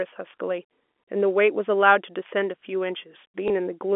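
At 3.48 s, packet loss with last packet repeated: one 20 ms packet went missing and the previous one was replayed, producing a small blip, visible as a duplicated waveform stretch within the 250 Hz to 3.4 kHz telephone band.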